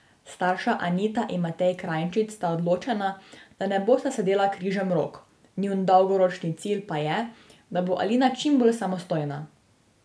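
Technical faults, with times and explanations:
No technical faults can be heard in this speech recording. There is nothing to time or explain.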